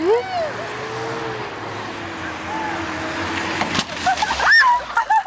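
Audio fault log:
Throughout, resampler restarted on every block: each 20 ms block is converted without its neighbours' samples, leaving a small error at every edge. Those errors form a 50 Hz buzz riding on the signal, seen as evenly spaced vertical lines on a spectrogram and periodic glitches in the waveform.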